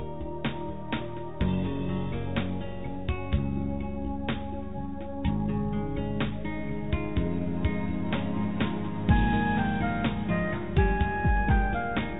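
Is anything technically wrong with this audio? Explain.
No, nothing is technically wrong: the audio carries the expected signature of a narrowband call path, with nothing above 4 kHz, which fits a G.711 mu-law link at 64 kbps.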